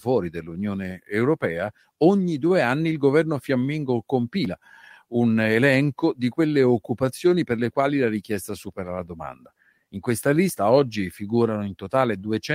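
Clock drift between sender and receiver runs through the whole speech clip. The sender's clock runs about 4% slower than the receiver's. The receiver's buffer keeps draining, so it must fill gaps. The pace feels faintly uneven throughout.

Repeated timing corrections occur from 0.44 s to 12.18 s. The receiver keeps repeating short pieces to stay in step. Together they stretch the audio to 96% speed, adding roughly 0.4 s. Each repeat is small. They come as slight, irregular hiccups.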